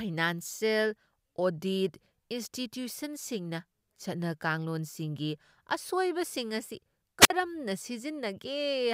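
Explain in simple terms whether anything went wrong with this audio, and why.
Something did go wrong, near the end of the speech. From about 7.20 to 7.30 seconds there is a wireless microphone squelch dropout. The radio link between the microphone and its receiver weakened for a moment. A short burst of hiss rises first. Then the receiver's squelch shuts the sound off, leaving a nearly silent gap of about 52 milliseconds. After that, the signal recovers and the speech comes back.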